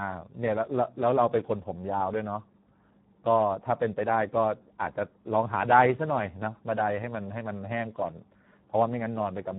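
From start to finish the speech runs through the Speex codec at a low quality setting, which fits roughly 8 kbps, leaving the excitation starved of bits. The voice sounds hoarse and noisy, with nothing above about 3.8 kHz.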